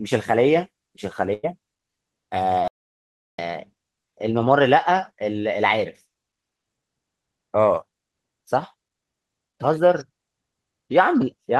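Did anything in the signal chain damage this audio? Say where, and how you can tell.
Yes. A burst of packet loss at the network stage hits 1.33 to 1.45 s. About 100 ms never arrived, and the receiver stretched the last sound into a fading buzz or hiss before jumping ahead. That continued, decaying fill separates it from a clean dropout.

An audio dropout to silence runs from 2.68 to 3.39 s, roughly 0.7 s of silence with no room tone. The sound cuts off mid-flow, which points to a likely failed input or link ahead of the recorder. It has no concealment fill, unlike the network faults.

A short concealed packet loss, also at the network stage, appears at 6.81 to 6.84 s. Only about 20 ms went missing and was patched from the preceding sound. It comes across as a brief smear or wobble rather than the longer, audible fade at 1.33 s.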